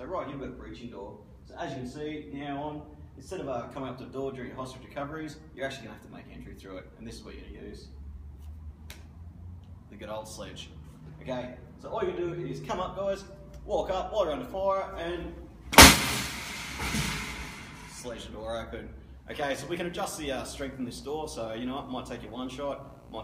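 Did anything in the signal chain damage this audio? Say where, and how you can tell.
Yes: video or display buzz entering through the analogue wiring from 19.29 s to the end. A screen or video cable couples a 59.94 Hz field-rate buzz with hash above it, about 20 dB below the signal. A spectrogram shows a dense harmonic comb plus a steady line at 15.7 kHz, the video line rate.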